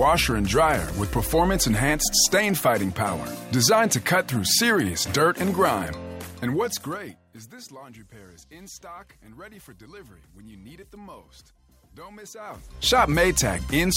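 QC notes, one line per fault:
12.34–12.95 s, zipper noise: a level change of roughly 25 dB arrives in around a hundred unsmoothed steps a second, each jump leaving a tiny click, so a rapid ticking buzz rides on the sound while the gain moves.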